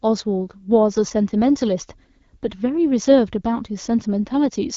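No technical faults are audible in the speech, which carries the band-limited character of AMR wideband (HD Voice) coding at 12.65 kbit/s, with nothing above about 7.4 kHz.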